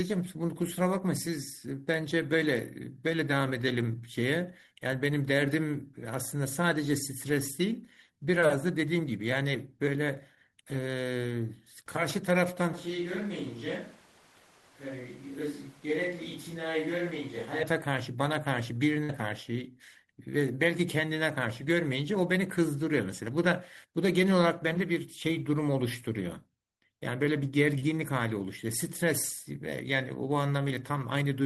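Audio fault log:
12.73–17.63 s, switch to a distant microphone: the speech abruptly turns roomy and hollow, loses bass, drops about 5 dB and gains room noise around 25 dB below the speech. The likely cause is a far microphone standing in for the close one. Unlike added reverb or EQ, every change arrives and leaves together, instantly.
19.03–19.12 s, burst of packet loss: the last sound is held and faded for about 53 ms, then the speech resumes with about 60 ms skipped. Unlike a plain dropout or click, the gap is filled with a decaying continuation and the sound jumps ahead.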